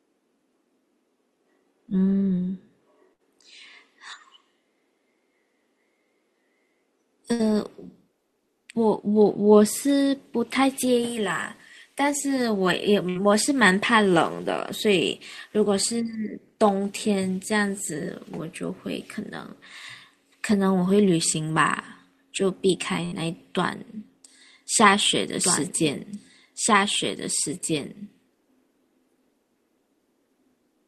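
There are four bursts of packet loss, at 3.13, 7.33, 13.09 and 23.05 s. Each time, the receiver bridges the hole by stretching the last bit of speech for around 60 ms, fading it as it goes, so you get a short held buzz or a dying hiss. Then the talker jumps back in with about 60 ms of speech simply gone. The one at 23.05 s runs a little longer, to 23.25 s.

From 25.43 s to the end there's a doubled audio track: a second, clean copy of the speech trailing about two seconds behind and roughly 5 dB down. It has no room tail or smearing, just the same full-band audio overlaid, and it cuts in abruptly. That's most likely a second capture path running late, or an edit that left two offset copies stacked.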